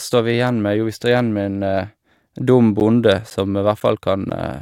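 From 2.8 s to 4.31 s the speech carries a regular tick every 0.5 s, about four in all, each a gap of roughly 10 ms dropped to silence. These are periodic USB or driver dropouts: something stalls the audio path at a fixed interval, losing a sliver of signal each time.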